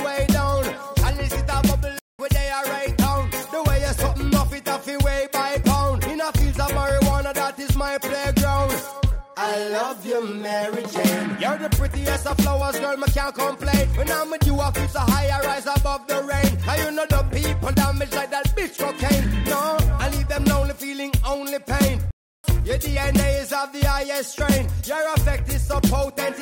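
Two playback stalls here, where the audio just stops mid-flow and goes silent before carrying on: the first runs from about 1.99 to 2.19 s, a 200 ms gap, and the second from 22.11 to 22.44 s, roughly a third of a second. The cause is likely the player running dry on buffered data or its audio thread getting blocked, so nothing reaches the output until it catches up and resumes.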